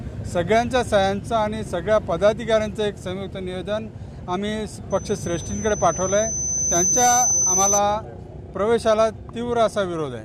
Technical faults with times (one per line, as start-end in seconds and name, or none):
4.90-7.81 loudspeaker feedback squeal